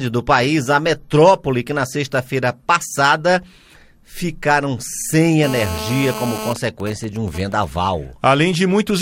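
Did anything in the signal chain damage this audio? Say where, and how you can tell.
Yes. GSM phone buzz runs from 5.44 s to 6.53 s and enters at the analogue wiring. A hard, raspy buzz at 217 Hz, thick with harmonics, sits about 9 dB below the programme and bears no relation to it. A nearby 2G phone in a call transmits radio bursts 217 times a second. An exposed cable or input picks up those pulses, and a junction in the audio circuit rectifies them into audible buzz.

GSM signalling bursts follow from 6.56 s to 7.65 s, again in the analogue stage. The continuous buzz breaks into even ticks with a longer 217 Hz buzz twice a second, quieter at roughly 15 dB below the signal. This fits the same phone still in its call while its user is silent. The handset then sends only short groups of bursts, and the circuit rectifies each group into a tick or brief buzz.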